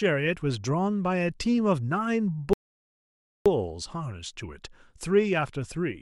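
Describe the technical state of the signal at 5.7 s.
At 5.7 s the audio is intact, with no fault audible at that point in the speech.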